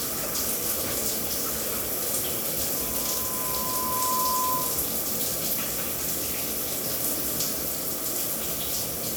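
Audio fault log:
2.75–4.94 s, loudspeaker feedback squeal: the microphone picked up its own loudspeaker, and the loop gain rose above one at 1 kHz. That tone fed itself, swelling over roughly a second and a half into a steady squeal sitting a few dB above the sound.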